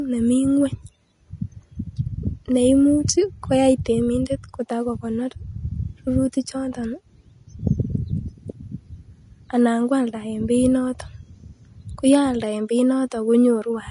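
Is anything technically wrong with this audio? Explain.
Yes. Throughout the speech, the treble stops sharply at 10.6 kHz, and the upper range sounds hissy and grainy. This is likely Vorbis compression at a low setting, around 31 kbps by the sound. The codec lowered its cut-off and quantised fine high detail into matching noise.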